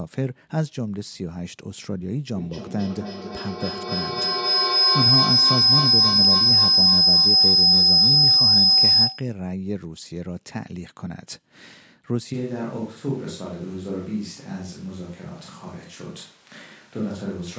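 Feedback howl runs from 2.35 to 9.45 s. The sound from one device's loudspeaker was picked up again by a microphone in the same room, and it gained level on each trip around the loop. A tone near 5 kHz builds up, pulsing roughly every 300 ms, and peaks about 10 dB above the speech.

From 12.35 s to the end, the sound suddenly turns roomy and hollow, with less bass. Room noise sits around 25 dB below the speech, and the level stays about the same. This is likely a switch to a distant microphone after the close one dropped out.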